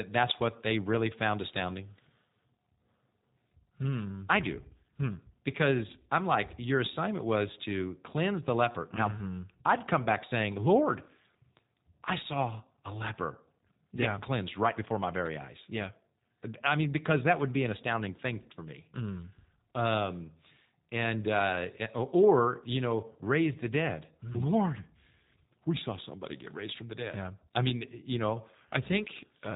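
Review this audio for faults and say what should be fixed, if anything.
Throughout the speech, the sound is slightly rough and synthetic, with no content above 3.8 kHz. This is G.729 codec damage: each 10 ms frame is rebuilt from a vocal tract filter, pitch predictor and a few pulses, which fits 8 kbit/s. To prevent it, record or transmit with a wideband codec at a higher bitrate.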